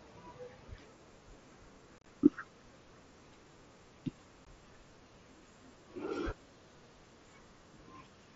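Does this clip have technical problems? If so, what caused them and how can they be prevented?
Yes. Unconcealed Bluetooth headset packet loss chops the speech from 1.98 to 2.06 s, with gaps up to 30 ms, and again briefly at 4.45 s. Missing packets become hard-edged silent holes. Keep the headset closer to the phone and away from interference, or use a link with packet loss concealment.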